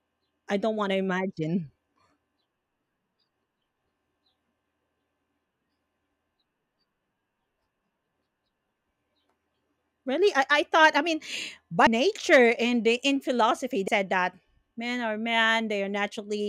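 Compressed frames are skipped at 8.73, 11.86 and 13.87 s. The speech jumps ahead by roughly 100, 150 and then 200 ms, which fits losing about four, five and seven 26.1 ms frames.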